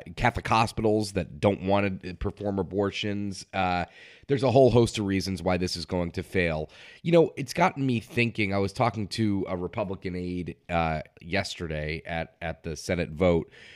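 No technical faults can be heard anywhere in the speech.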